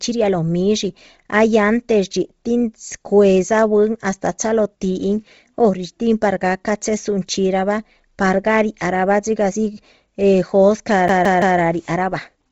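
From start to finish the speech has a breathy, grainy edge, with nothing above about 7.7 kHz and a noisy fizz where the upper detail should be. This is likely Bluetooth LC3 compression at a low bitrate, in line with roughly 24 kbps and 7.5 ms frames.

Just after "eh jóscah", from 11.08 to 11.59 s, a CD stuck on one turn is heard: the same 0.17 s slice plays three times with a tiny mute at each jump, because the laser falls back one track on every rotation.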